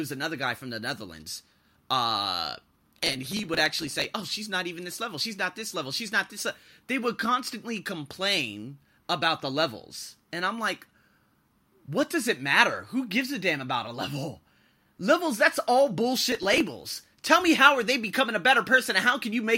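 A gritty, tearing crackle runs over the speech from 2.79 to 4.04 s, and a shorter burst of the same texture returns from 16.32 to 16.60 s. Both are processor overload crackle. The processor repeatedly fell behind on very small audio buffers, each well under a millisecond, and each late buffer was simply skipped, leaving a hard-edged gap. The first burst points to around a hundred missed deadlines and the second to roughly fifteen.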